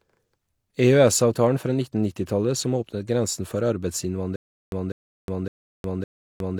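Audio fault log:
4.36–6.59 s, stutter with silent gaps: a 0.2 s burst of speech repeats four times every 0.56 s, with 0.36 s of silence between, until the end; likely a stalled stream replaying its last fragment.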